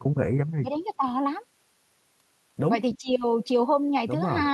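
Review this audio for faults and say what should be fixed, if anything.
Speech suppressed in double talk, between 0.53 and 1.03 s and again from 2.98 to 3.09 s: the echo canceller likely mistook simultaneous talk for echo, pushing the speech down by about 25 dB and about 20 dB.

Echo leak at 2.93 to 2.98 s: the far end's canceller likely passed residual loudspeaker pickup, returning a faint copy delayed 318 ms, about 20 dB below the speech.

Better double-talk detection and a more thoroughly converged echo canceller at the loudspeaker end would prevent both faults.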